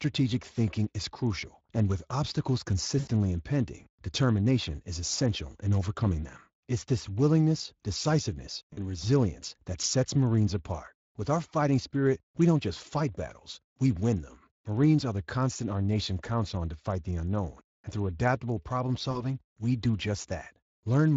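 It's a speech clip, and the whole thing carries plainly audible Speex codec damage. The CELP coding leaves the voice with that hoarse, noisy edge of a low-budget excitation signal, and the quality fits a Speex bitrate of roughly 20 kbps. There's also VoIP packet loss concealed by the speech codec in three spots: 2.99 to 3.08 s after "crucial and with obstacles", 8.73 to 8.79 s after "this willingness decisiveness", and 19.11 to 19.37 s after "and through adaptable problem". Each time the decoder stretches its last pitch and filter into a fading buzzy tone or coloured noise. The first gap sounds like about 80 ms of lost packets and the other two like about 40 ms, and the voice needs a moment to recover once packets return.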